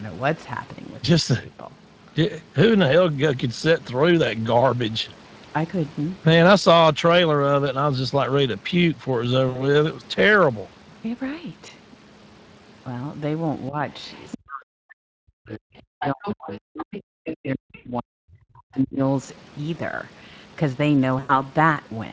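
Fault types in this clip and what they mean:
Speex codec: The encoder has too few bits to model the signal's excitation, which fits a bitrate of around 20 kbps. The result is plainly audible throughout as a hoarse, noisy grain, with the top of the band stopping at 8 kHz.
VoIP packet loss concealed by the speech codec: Runs of packets went missing, and the decoder filled each gap by repeating its last pitch and spectral shape at falling gain. Near 9.49 s (about 60 ms), 17.75 s and 21.19 s (about 100 ms each), the sound is stretched into a buzzy tone or coloured noise that fades.
Speech suppressed in double talk: The echo canceller likely could not tell the talker from loudspeaker echo while both sides spoke, and attenuated everything. At 13.69 s the level dips briefly by about 10 dB. From 14.36 to 19.01 s it is pushed down much further, up to about 40 dB.
Other side's voice leaking through: Echo cancellation likely left some of the far-end loudspeaker sound in the microphone signal. 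Scraps of a second voice sit about 10 to 15 dB below the talker at 14.03, 16.01, 16.76 and 17.25 s, each lasting a few hundred milliseconds.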